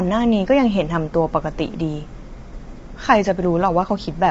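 From start to finish, the speech carries plainly audible coding damage. The voice sounds rough and grainy. Noise fills the gaps between the pitch harmonics. Nothing is heard above 7.7 kHz, so the top band is cut away. The cause is likely low-delay AAC compression, of the AAC-ELD kind used for video calls. Its short frames cannot resolve harmonics finely. The damage points to a low rate, around 24 kbps.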